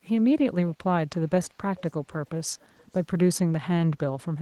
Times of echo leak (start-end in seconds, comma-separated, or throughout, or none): 1.43-1.48, 1.77-2.99